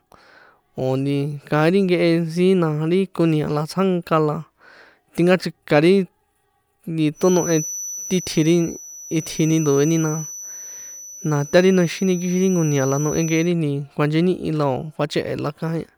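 Speech recording with a feedback whistle running from 7.12 s to 13.54 s. A thin, steady tone at about 5.9 kHz sits behind the speech for that stretch, roughly 15 dB below it, swelling and fading slowly in level but never building up. The likely cause is a loudspeaker-to-microphone loop held just at the edge of instability, where the gain at that one frequency is high enough to sustain a tone without tipping into runaway howl.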